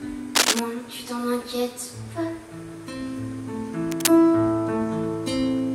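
At 0.35 to 0.60 s, and again at 3.91 to 4.09 s, there's cable scratch noise: short, ragged bursts of scratchy rustle, the first a bit louder than the sound itself, the second about level with it. A worn cable or connector being shifted is the likely cause.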